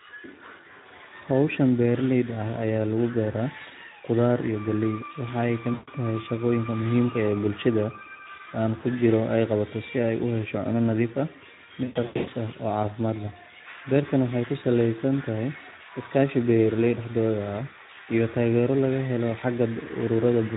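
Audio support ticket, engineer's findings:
Speex codec, whole clip: speech coded at 11 kbps, damage plainly audible. Too few excitation bits, so the speech sounds hoarse and noisy.

VoIP packet loss concealed by the speech codec, 5.73–5.90 s: about 140 ms missing, just before "tahay shaqooyinka muhiimka". The decoder stretches the last pitch and filter into a fading buzz or coloured noise, and recovery stays weak for a moment after.

Same fault, 11.83–12.31 s: about 340 ms lost in scattered gaps over 440 ms, longest run 120 ms. The sound repeatedly smears into buzzy or noisy, decaying fill. Each concealed frame builds on the last, so the distortion carries between the gaps.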